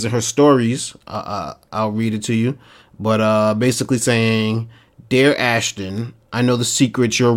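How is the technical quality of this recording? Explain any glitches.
The speech is marred by four sharp clicks. These are very likely dropped samples, at 1.15 s (right after "in her stories"), 2.13 s (after "uh I'll read"), 3.72 s (after "to you but uh") and 4.94 s. Each time, a fraction of a millisecond of the stream goes missing, so the waveform jumps straight to a later value. Nothing audible is lost, but that sudden step comes through as a single sharp tick, a thin vertical line in the spectrogram.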